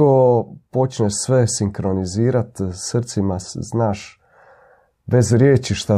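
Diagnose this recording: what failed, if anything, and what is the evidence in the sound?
Nothing failed: no stage of the chain, from wiring through to playback, leaves any audible mark on the speech at any point in the recording.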